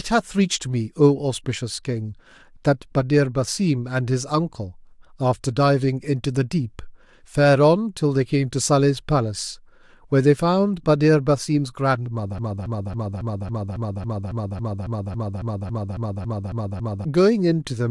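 At 12.39 s the speech snags into a broken-record loop: a roughly 0.28 s fragment repeats back to back, 17 times, until 17.05 s. The player or stream has likely stalled and kept replaying its last chunk, so whatever should have come there is simply gone.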